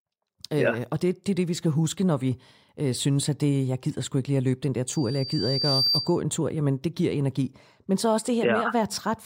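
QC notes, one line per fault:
4.87–6.21 s, loudspeaker feedback squeal. A pure tone near 4.7 kHz swells out of the speech over about a second and ends a few dB above it. The microphone hears its own loudspeaker, and loop gain at that frequency exceeds one.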